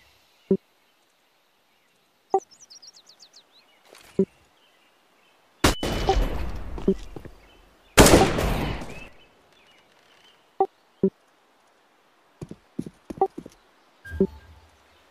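At 2.30, 5.83, 9.08 and 14.65 s there are short blips from damaged data in a compressed stream. Corrupted bytes make the decoder misread frames and lose sync. It then hunts for the next frame header, and a brief chirp, squawk, click or short hole breaks through.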